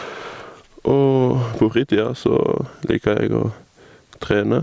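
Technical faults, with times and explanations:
Throughout, gain pumping: the gain swings by roughly 10 dB, so loud and soft passages sit close together and sound squashed. The likely cause is gain set far too high, with a fast limiter pulling it down on each loud sound. The waveform envelope looks flattened. The spectrogram shows nothing above the 8 kHz top of the call processing.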